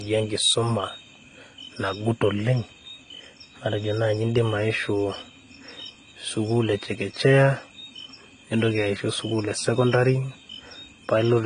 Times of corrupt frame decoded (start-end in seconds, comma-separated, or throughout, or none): none